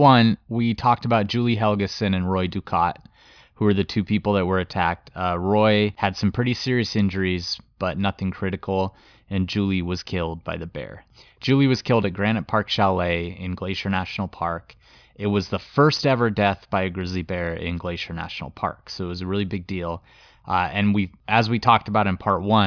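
Speech recording with no audible technical faults.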